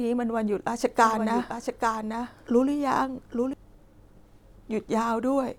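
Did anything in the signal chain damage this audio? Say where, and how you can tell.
Yes. From 1.03 s to 3.53 s, a second copy of the speech, about 5 dB quieter, runs about a second behind itself. It is dry and full-band, and it cuts in and out abruptly. This is a doubled audio track, likely from a slower second capture path or an out-of-step edit.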